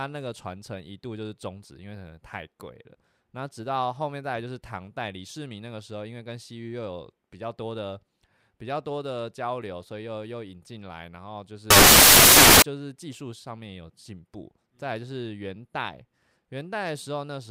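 A speech clip with samples built from the wrong bytes from 11.70 to 12.62 s. The byte order or alignment slips, so the sound turns to loud, harsh broadband noise.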